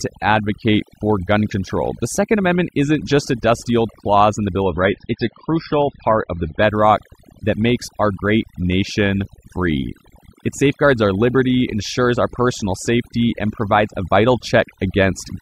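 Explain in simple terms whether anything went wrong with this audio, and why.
Throughout the clip the speech sits over an almost silent background with twinkling specks. This is overdone noise removal: a cleanup tool set too strong erased quiet parts of the voice along with the background noise.

From 4.62 to 6.62 s the sound suddenly turns duller, with no gap. This is an adaptive stream at a lower bitrate: a slowed connection briefly switched playback to a lower-quality copy.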